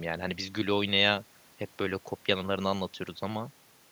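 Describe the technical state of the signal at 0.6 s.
At 0.6 s the speech signal is intact, with no audible dropout, distortion, glitch or other fault at that moment.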